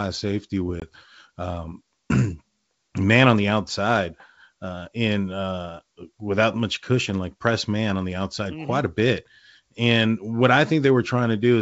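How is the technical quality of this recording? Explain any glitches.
There's one glitch: packet loss on an ADPCM call, around 0.80 to 0.88 s. About 20 ms, likely a couple of packets, drops to hard-edged silence. Afterwards the decoder's predictor and step size no longer match the sender's, so the speech comes back slightly distorted before settling. The wideband G.722 coding carries through clean, with at most a light hiss in the upper band.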